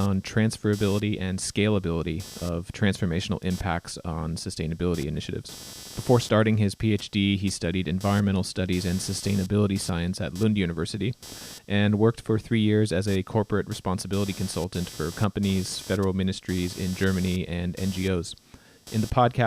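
Computer activity noise runs through the whole speech clip: processor and peripheral load changes are disturbing the audio circuit's shared ground, so a buzzy, chirping hum pulsing at around 300 Hz sits roughly 20 dB below the speech, rising and falling with machine activity, not the talking.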